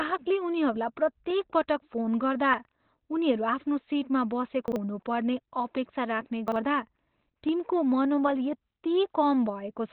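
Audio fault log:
Throughout: Opus compression, likely in its narrowband speech mode. Nothing above 4.2 kHz survives, so the speech sounds muffled and hoarse, with heavy coding damage.
4.68–4.76 s and 6.48–6.56 s: chunks out of order. Each time a 40 ms piece plays one chunk late, giving a brief jumbled moment.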